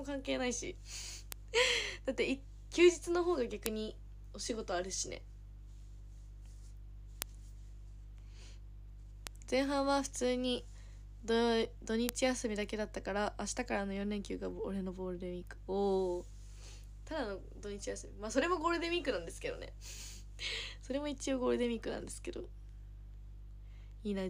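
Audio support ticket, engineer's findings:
Bit error spikes: five isolated sharp ticks at 1.32, 3.66, 7.22, 9.27 and 12.09 s, peaking at about -10, -4, -4, -16 and -4 dBFS. Single flipped bits (memory or digital link) jump samples by a power of two. Waveform shows lone vertical needles, the 9.27 s one slightly wider; spectrogram shows thin full-band vertical lines.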